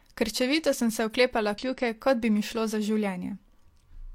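At 1.58 to 1.64 s, between "sem se oklepala" and "kot bi mi šlo", damaged data in the compressed stream makes a brief glitch where the decoder loses sync.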